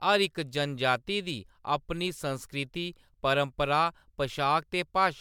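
Across the whole speech clip the sound has a swirly, hollow quality, with consonant onsets smeared rather than crisp, more degraded than a bitrate in the mid-140 kbit/s range alone would produce, even though content still reaches up to about 20.1 kHz. This is likely generation loss: the audio appears to have been through MP3 decoding and re-encoding about five times, each pass requantising on a shifted frame grid so the artefacts stack up.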